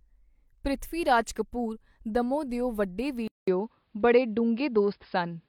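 At 3.28 s the recording input likely switched to a poorer device, and the speech stays on that path to the end. A 200 ms silence marks the changeover. After it, the narrower band passes nothing above 5.2 kHz, so the speech turns duller and boxier and loses its crisp sibilance. The level shifts by a few decibels, and a faint new background noise sits well below the speech.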